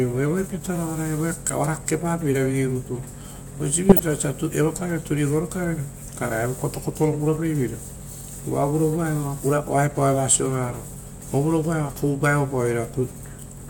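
Speech recording with a burst of DAB burbling from 3.89 to 3.99 s, spanning five MP2 frames. Bit errors at about 0.07 percent got past the error correction into the audio data, putting short blips of noise into single sub-bands.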